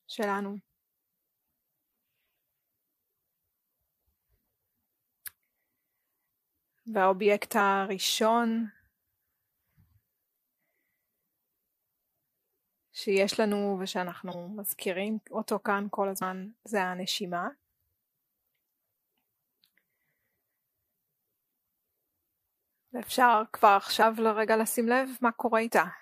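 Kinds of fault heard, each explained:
Compressed frames skipped: whole blocks of the encoded stream never reach the output, either lost from the file or rejected by the decoder as damaged, so playback leaps forward instead of pausing. It happens four times, at 14.31–14.35 s, 16.21 s, 24.01 s and 25.66–25.70 s, dropping roughly 150, 70, 100 and 20 ms of audio. Unlike a dropout, there is no silent gap.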